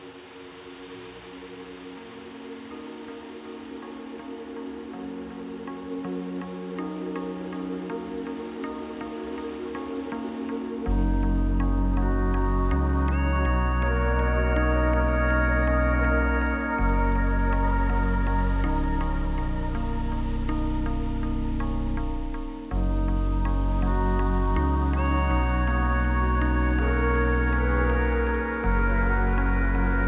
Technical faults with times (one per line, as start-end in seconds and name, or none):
none